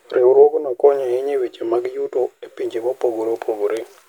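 Listening to the speech recording, nothing technical stood out as wrong at any point.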